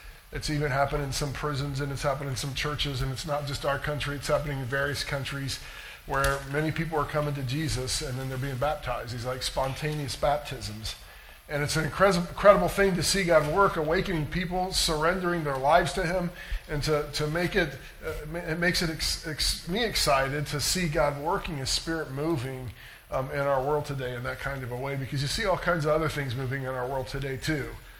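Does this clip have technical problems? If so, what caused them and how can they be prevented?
No, nothing in this clip points to a technical fault, so there is nothing here to diagnose or prevent.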